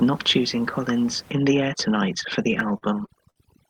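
From 1.32 s to the end at 3.70 s, overdone noise removal sets in: the suppressor, acting too hard on room noise about 24 dB below the speech, drives bands near its noise estimate down or out. Background drops and breaks up into twinkling specks.

Between 2.51 s and 3.38 s, repeated stalls (stutter) occur: packets arrived late, so the jitter buffer ran dry six times and the receiver stretched the last sound to cover 144 ms in total, the longest gap 58 ms. Nothing is lost, but the speech drags and stutters, with the Opus path's 12 kHz upper limit beneath it.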